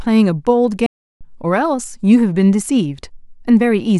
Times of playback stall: 0.86-1.21

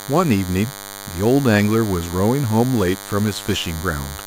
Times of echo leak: none

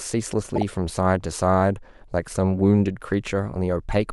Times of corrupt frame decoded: 0.55-0.62

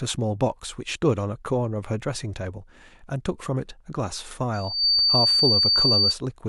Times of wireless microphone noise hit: none

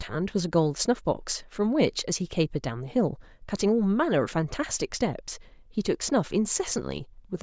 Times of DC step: none

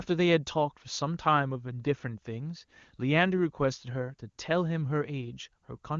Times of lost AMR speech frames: none

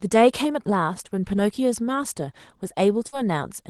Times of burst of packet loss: 3.07-3.18

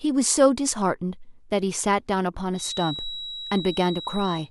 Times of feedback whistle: 2.51-4.51

